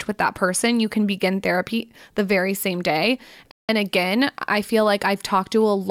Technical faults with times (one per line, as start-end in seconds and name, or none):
3.51-3.69 Bluetooth stall